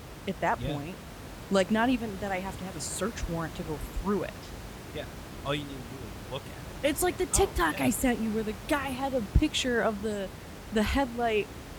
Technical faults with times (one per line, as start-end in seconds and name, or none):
none